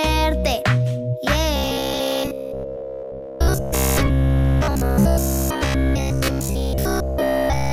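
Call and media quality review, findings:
Rigid metallic buzz from 1.56 s to the end, at about 66.7 Hz, sound still loosely traceable. Robotic sound from repeated short buffers: likely the playout side looping its last 15 ms chunk as fresh audio arrives too late, all real content skipped; fixed pitch equals one over that loop length.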